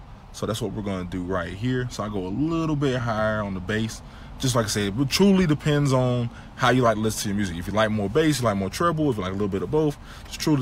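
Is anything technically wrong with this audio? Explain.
Yes. Hard clipping occurs twice: from 5.16 to 5.94 s, overdriven by about 3 dB, and from 6.64 to 6.89 s, by about 5 dB. In both spans the signal exceeds what a stage in the chain can pass, so the peaks are sliced flat. Those flattened tops generate high-order harmonics, heard as crackle and edgy distortion on the loudest moments. The second, shorter event is pushed harder and sounds harsher.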